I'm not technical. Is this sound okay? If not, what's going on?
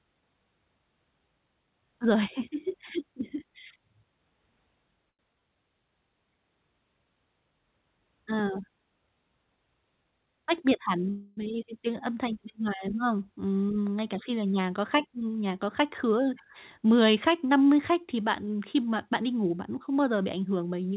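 No. At 5.10 to 5.21 s there is a short stall from a late packet: a piece of the call data arrived late, so the receiver stretched the last sound for about 90 ms instead of leaving a gap.

There is also a jitter buffer speed-up, from 10.04 to 11.05 s and from 14.16 to 16.29 s. The receiver had built up too much waiting audio, so it snipped out tiny slices, about a tenth of a second in the first stretch and about a fifth in the second. The speech plays 8% faster at normal pitch and sounds hurried.

From 11.10 to 11.39 s there is a call audio freeze. Data was likely held up on the way. For about a quarter of a second the last sound hangs on as a fading buzz or hiss, with no true silence, before the speech carries on where it left off.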